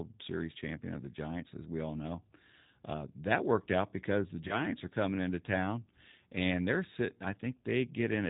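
From start to finish the speech sounds slightly rough and synthetic, with plainly audible codec damage and a dull top end because nothing above 4 kHz comes through. That is the G.729 codec at work, here the G.729A variant, with a sound that fits its 8 kbit/s rate. Rather than sending the waveform, it rebuilds each 10 ms frame from a vocal tract filter, a pitch predictor and a few pulses, and that coarse reconstruction gives the voice its artificial texture.

From 4.48 to 4.64 s the voice briefly smears into a stretched sound that fades, then comes back weak or distorted before it recovers. This is VoIP packet loss concealed by the speech codec. About 20 ms of audio went missing, which fits a single lost packet. The decoder filled the gap by extending its last pitch and filter settings. Because each frame builds on the one before it, the damage lasts about 160 ms, well beyond the gap itself.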